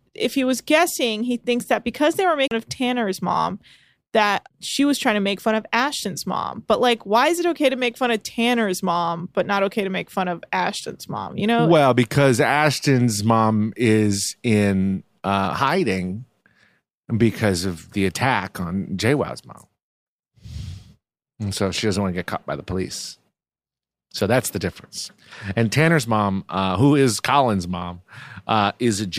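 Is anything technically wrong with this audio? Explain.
Yes, there's a CD skip early on, from about 2.47 to 2.51 s. The laser got knocked off its track, or hit a flaw in the disc, and jumped to another turn of the spiral. The player briefly muted, for roughly 40 ms here, and then picked the speech back up from that new spot. You hear it as a short tick or gap, and the speech lurches abruptly rather than carrying on smoothly.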